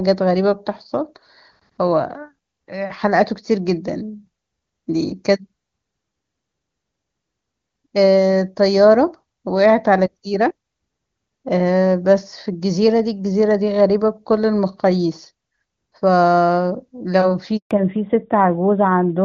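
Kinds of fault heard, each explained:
Handover gap: The call was passed from one network to another at about 17.57 s, and no speech frames came through while the link changed over. The speech fades out within a few tens of milliseconds and leaves a silence of roughly 140 ms, ending at about 17.71 s. Whatever was said in that window is simply gone, with no smearing or repetition to fill the hole.
Fallback to narrowband: When the new link picks up at about 17.71 s, the call no longer carries HD Voice and has dropped to an older narrowband codec, which points to AMR-NB at its top 12.2 kbit/s rate. Everything above 4 kHz disappears for the last second and a half. The speech loses the crisp, airy top it had before, where the wideband coding at a rate that fits 23.85 kbit/s was clean, and sounds duller and boxier to the end.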